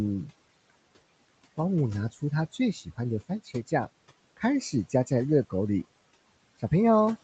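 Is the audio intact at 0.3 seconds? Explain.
No. Noise suppressor artifacts run through the whole clip, including 0.3 s. The suppressor judges which frequency bands hold steady room noise and lowers them frame by frame, by about 21 dB. The background sinks in pauses and rises again under the speech.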